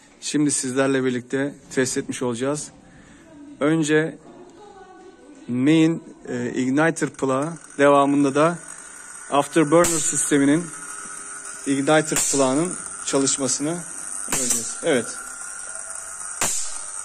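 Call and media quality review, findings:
Call and media quality review findings: no faults heard in this clip.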